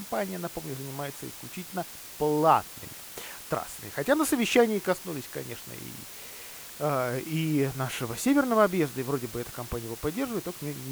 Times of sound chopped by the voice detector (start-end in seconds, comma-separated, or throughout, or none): none